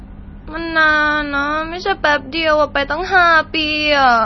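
From start to finish the speech sounds watery and swirly, with a smeared, warbling texture and a dull top end that stops abruptly at about 5.9 kHz. This is likely heavy MP3 compression. Short of bits, the encoder cuts everything above a fixed frequency and discards weaker frequency components, which then flicker in and out from frame to frame. The damage points to a very low bitrate, around 24 kbps.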